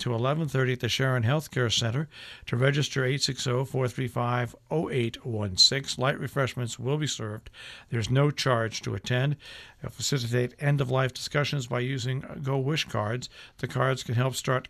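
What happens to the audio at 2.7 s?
Nothing goes wrong at 2.7 s; the audio plays through that moment intact, with no dropout, click or distortion.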